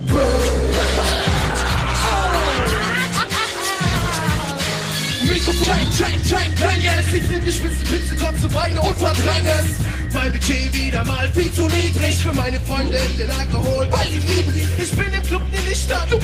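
At 5.63 to 5.65 s there is a skip ahead: about 0.7 s of audio was discarded, in transit or by an overflowing jitter buffer, and playback jumps straight to later material. Unlike a dropout, no silence or fill marks the join.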